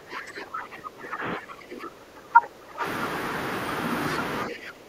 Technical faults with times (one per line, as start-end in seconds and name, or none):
0.00-2.84 speech suppressed in double talk
4.47-4.89 speech suppressed in double talk